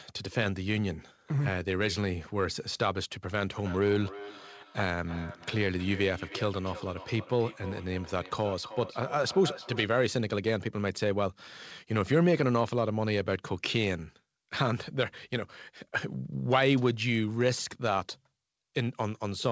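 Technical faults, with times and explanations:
3.49–9.92 s, feedback echo between two devices: the speech returns at a steady interval of roughly 300 ms, each repeat thinner and more ringing than the last, peaking about 15 dB below the direct speech. A second device in the room is replaying the call, and this microphone picks that playback up again. The local echo canceller only removes its own device's output, so the returning sound passes through, band-limited at 8 kHz like the rest of the call audio.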